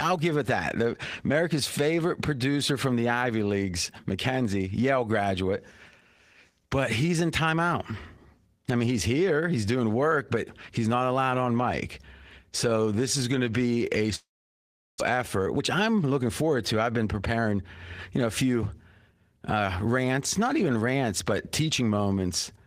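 At 14.15 s, right after "going to be a", the sound stops and the last fragment is stretched into a short fading buzz, followed by roughly 0.73 s of silence until audio resumes at 15.02 s. This is most likely a long network dropout: packets stopped arriving, the receiver concealed the gap by extending what it had, and about 0.6 s of the original audio was never played. The stall leaves playback running about a fifth of a second later than before.

Immediately afterward come two stretches of jitter buffer speed-up, from 15.14 to 16.49 s and from 16.90 to 17.52 s. Both run at about 110% speed with unchanged pitch. The buffer had built up excess delay after the gap, and the receiver worked it back down by repeatedly cutting out short pitch-period-length pieces. That removes roughly 150 ms and 70 ms respectively, and the speech sounds noticeably hurried in both spans.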